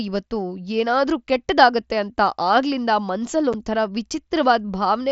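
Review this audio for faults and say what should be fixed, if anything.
At 3.53 s there's a brief hole of about 7.5 ms, which fits one dropped headset frame. That's unconcealed Bluetooth headset packet loss: the lost chunk of the mSBC stream was replaced with silence or an idle pattern, so the speech cuts out with abrupt edges. Worth fixing by turning on packet loss concealment in the receiving stack and keeping the headset close to the phone, away from Wi-Fi congestion, so fewer packets drop.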